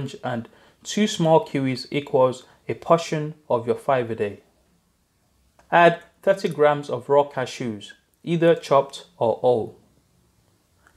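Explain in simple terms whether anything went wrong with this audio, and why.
Nothing went wrong here: the sound carries on steadily, with no dropouts, glitches or odd jumps anywhere along the way.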